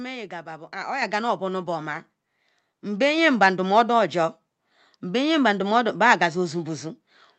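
At 1.02 s, then again at 2.04 s, you get the microphone volume stepped up: the call software decided the mic was too quiet and bumped the input gain, by about 6 dB and then about 3 dB. Voice and background both jump louder at once, all coming through the call's Opus path, band-limited around 8 kHz.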